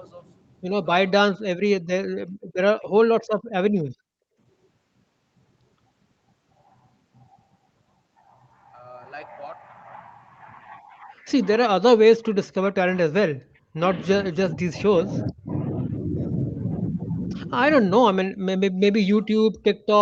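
At 2.32 to 2.37 s the room background is gated by the echo canceller, dropping about 39 dB for a brief moment. Only the ambience vanishes, not a voice, which sets it apart from double-talk suppression.

At 2.49 to 2.53 s a faint echo leak appears, a delayed copy trailing by 442 ms, far quieter than the speech. It is likely residual loudspeaker pickup that the canceller missed.

From 2.65 to 3.33 s the talker's speech is suppressed in double talk, cutting very deeply in pieces for a fraction of a second in total. This is likely the canceller ducking both sides while the far end also speaks. Unlike gating, the talker's own voice is what disappears.

The background gating recurs from 3.92 to 4.38 s, a dip of about 40 dB lasting roughly half a second.

Double-talk suppression returns from 11.8 to 15.54 s, chopping the speech for around two seconds in total. It comes back once more from 18.3 s to the end, where it is shallower, with the speech dipping rather than vanishing.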